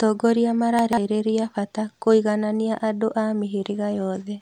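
From 0.79 to 0.98 s, just before "bata kũiganania andũ a", chunks out of order: a 46 ms chunk plays three chunks late, so the speech jumbles briefly. Unlike a dropout, no audio is lost or silenced; it is only misplaced.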